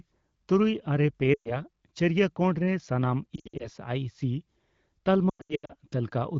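Speech smears and fades into brief hollow gaps at 1.33 to 1.57 s, 3.35 to 3.68 s and 5.30 to 5.73 s, with the last the longest and most broken up. These are lost AMR speech frames: the decoder stretched the last good pitch and vocal tract settings with falling gain, over a lightly coded AMR wideband (HD Voice) stream.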